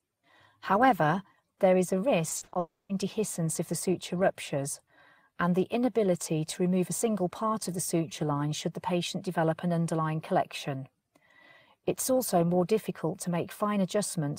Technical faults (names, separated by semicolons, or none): repeated packet loss (robotic sound); long network dropout